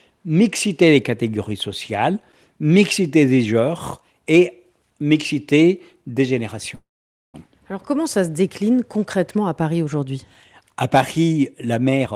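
At 6.75 s the speech stops moving forward and holds until 7.36 s, a call audio freeze of roughly 0.6 s. The receiver fills about 584 ms in all: the last sound carries on briefly as a fading buzz or hiss, then about 500 ms of near silence follows. This is likely packets stalling in transit until the jitter buffer drained. When the audio resumes it picks up where it left off, with nothing lost, but playback now sits about 584 ms later than before.

From 12.03 s to the end at 12.15 s, a jitter buffer speed-up is audible. The buffer holds more audio than its target, so the receiver trims it back by cutting out short pitch-period segments in quick succession, about a tenth of a second in total. The speech plays at roughly 174% of normal speed with its pitch unchanged, so it sounds rushed.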